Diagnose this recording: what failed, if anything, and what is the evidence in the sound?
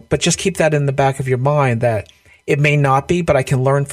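Nothing failed: none of the stages between capture and playback leaves any audible sign of a fault in this speech recording.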